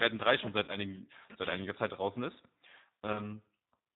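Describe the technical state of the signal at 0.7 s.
A buzzy, fading smear replaces the audio from 0.64 to 0.78 s, between "schon seit" and "seit einiger". This is VoIP packet loss concealed by the speech codec: about 40 ms went missing, consistent with two lost packets, and the decoder extended its last pitch and filter at falling gain. The rebuilt frames stay weak until the decoder recovers. Underneath, the speech sounds plainly rough and synthetic, with nothing above 4 kHz, which fits the G.729 codec at 8 kbit/s.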